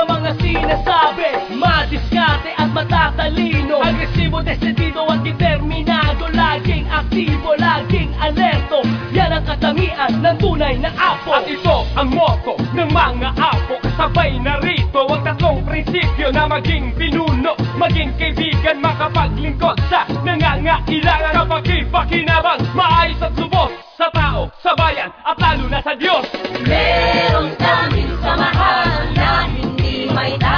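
Nothing stood out on listening.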